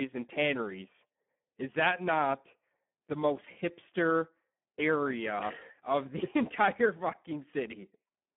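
Speex codec damage runs throughout the clip. Starved excitation leaves the speech hoarse, buzzy and somewhat robotic, which fits a setting around 8 kbps, within a 200 Hz to 3.4 kHz band and nothing above 3.7 kHz. Plain band-limiting would sound muffled but clean, without this gritty roughness.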